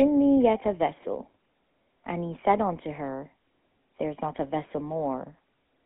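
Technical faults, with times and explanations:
Throughout, GSM full-rate codec: the speech is confined to 200 Hz to 3.4 kHz and has a plainly audible buzzy, gravelly roughness because the codec rebuilds the voice from a vocal-tract model driven by sparse, regularly spaced pulses. That grit, beyond the narrow band, sets it apart from plain telephone filtering.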